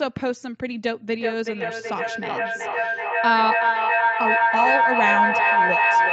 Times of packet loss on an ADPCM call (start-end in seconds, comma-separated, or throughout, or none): none